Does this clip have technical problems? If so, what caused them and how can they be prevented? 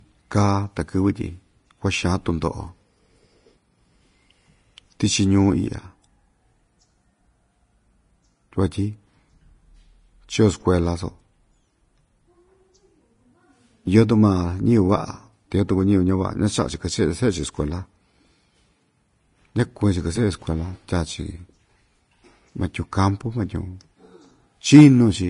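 Yes. Throughout, the speech sounds hissy and grainy, with nothing above 10.5 kHz. This is likely Vorbis compression at a low bitrate, around 30 kbps. Encode at a higher Vorbis quality setting to prevent it.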